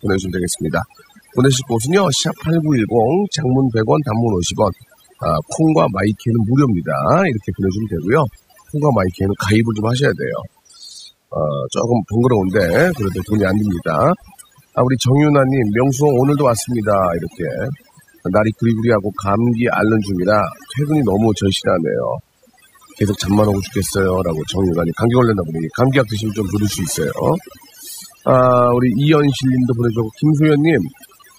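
From start to finish, this speech recording carries overdone noise removal. The noise reduction was pushed so hard that individual frequency bands are pulled down or switched off whenever their level sits close to the estimated noise floor, and the softer parts of the voice are cut along with the noise. Between phrases the background drops away, broken by twinkling specks. On a spectrogram the gaps look unnaturally dark, scattered with isolated bright dots, and the harmonics are ragged and patchy.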